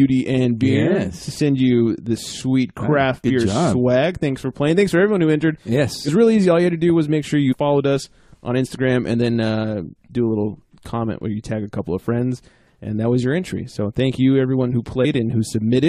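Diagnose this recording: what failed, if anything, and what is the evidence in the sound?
The failure is at the codec stage: compressed frames skipped. At 7.49 to 7.54 s and 15.01 to 15.05 s, the sound jumps forward, losing about 50 ms and 70 ms. Missing or rejected frames cause this.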